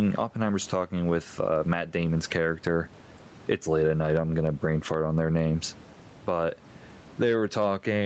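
Gain pumping runs through the whole clip, with the level swinging by something like 15 dB. The likely cause is input gain set far too high, with a fast limiter clamping down on each peak, which also squashes the speech. Unlike a noise gate, the background never drops to silence; it stays present, about 34 dB below the speech.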